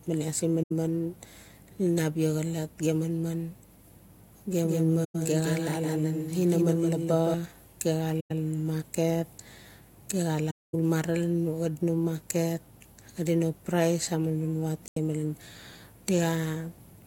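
Speech with two faults. AAC frame loss with muting leaves soft-edged silent gaps at 0.62–0.72 s, 5.04–5.15 s, 8.20–8.31 s, 10.50–10.75 s and 14.88–14.97 s, lasting about 85 to 235 ms. Lost frames had their spectrum zeroed, and the overlapping transform windows taper the sound out and back in. From 4.62 to 7.34 s a doubled audio track runs a full-band copy about 5 dB quieter and around 150 ms behind, dry and starting and stopping abruptly. The likely cause is a second, slower capture path mixed in with the first.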